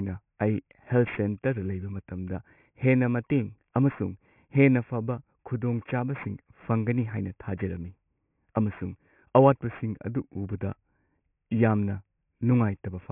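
Throughout, sibilants sound gritty and metallic, with harsh tones that don't belong to the speech, about 25 dB below it. This is aliasing. The audio was downsampled, apparently to about 6 kHz, without a low-pass filter, so content above 3 kHz folded back into the band.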